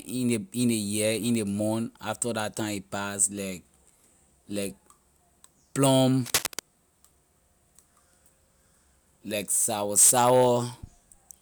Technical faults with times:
6.26-6.59 cable scratch noise

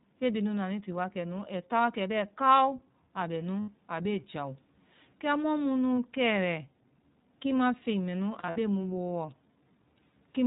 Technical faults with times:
0.00-10.47 iLBC codec
3.60-3.70 lost iLBC frames
5.94-5.98 lost iLBC frames
8.39-8.58 lost iLBC frames

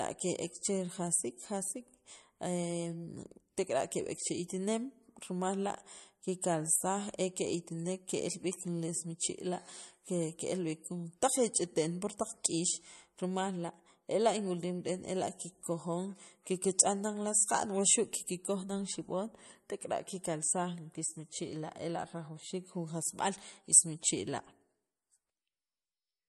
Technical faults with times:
0.00-26.28 MP3 compression

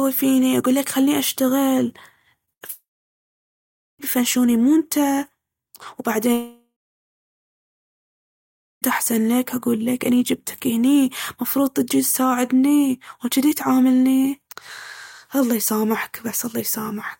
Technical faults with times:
2.45-2.71 short concealed packet loss
2.53-2.63 burst of packet loss
2.71-4.01 long network dropout
6.33-8.84 long network dropout

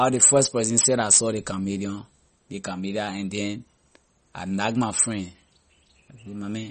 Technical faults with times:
0.00-6.71 MP3 compression

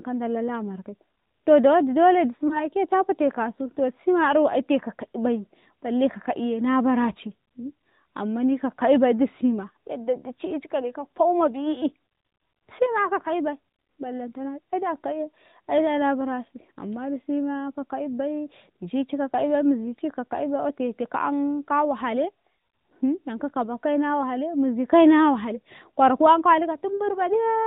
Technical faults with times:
0.00-27.66 AMR narrowband mobile codec
2.48-2.58 lost AMR speech frames

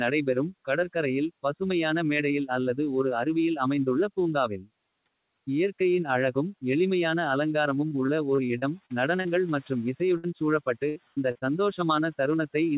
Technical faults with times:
7.88-9.27 repeated packet loss (robotic sound)
10.17-10.26 burst of packet loss
10.89-11.44 repeated packet loss (robotic sound)

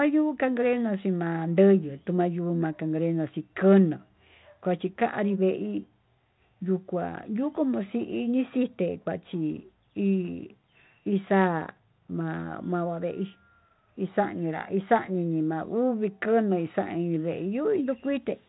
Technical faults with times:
none

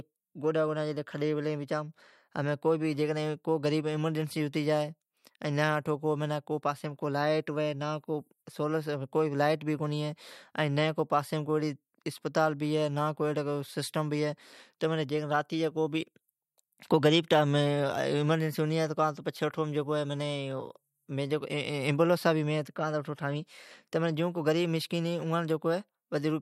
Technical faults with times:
none

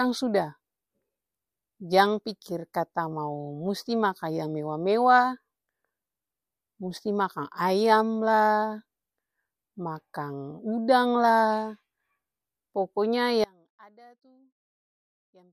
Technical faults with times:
13.44-15.53 audio dropout to a faint residue

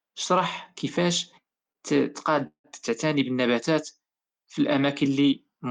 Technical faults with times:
1.72-1.78 short stall from a late packet
2.47-2.67 call audio freeze

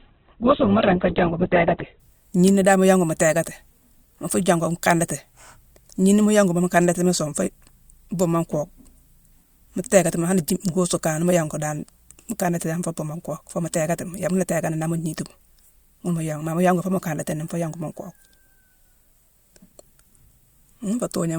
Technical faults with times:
0.00-2.00 adaptive stream starting at a low bitrate

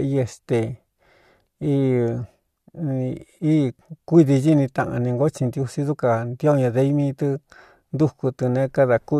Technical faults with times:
none

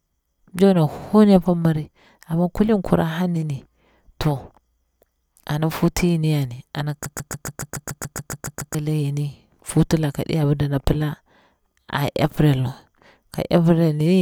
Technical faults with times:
7.06-8.75 broken-record loop

